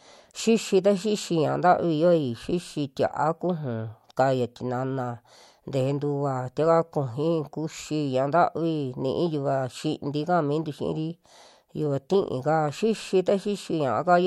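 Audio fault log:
No fault can be heard anywhere in the speech. There is nothing to log for any part of the recording.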